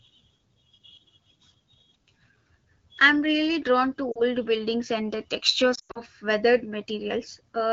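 Speech over an AMR wideband (HD Voice) link with two bursts of lost AMR speech frames. Right after "I'm really drawn to", at 4.11 to 4.22 s, the voice briefly drops out. That's about 40 ms missing, which fits two dropped frames. The decoder papers over the gap by repeating the last good pitch and vocal tract settings at lower gain. The second burst, from 5.75 to 6.01 s after "buildings and the", is worse. About 160 ms goes missing, spread over 200 ms. The longest gap is 100 ms, long enough for the sound to drop to near silence before it comes back weak or rough. The wideband coding sounds fairly clean, which fits the 12.65 kbit/s mode.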